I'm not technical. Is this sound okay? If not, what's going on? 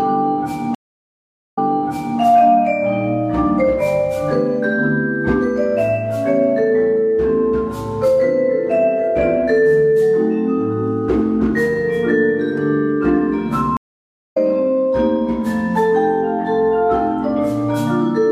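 No. At 0.75 s the sound cuts out for about 0.8 s, then restarts 0.63 s earlier and repeats a bit. At 13.77 s it drops for about 0.6 s and comes back roughly 0.7 s further on, skipping ahead. Both are a stream reconnect: the connection broke, and playback restarted from a different point.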